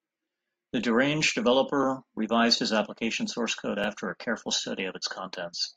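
At 1.83 s and 3.84 s, overlapping chunks cause a brief stutter. Chunks about 2 s long overlap, so 6.5 ms of speech repeats, heard as a click.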